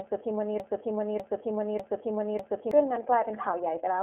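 The iLBC codec narrows the speech throughout to a telephone band of roughly 300 Hz to 3.4 kHz, with nothing above 3.7 kHz. Each 30 ms frame is coded on its own at a rate that points to iLBC's 13.33 kbps mode, leaving the speech audibly rough and synthetic.

A broken-record loop runs from 0.60 s to 2.71 s. A fragment about 0.6 s long repeats exactly, back to back, four times. This likely comes from a stall in the player or stream that kept resending its last buffer, so the speech due in that span is lost.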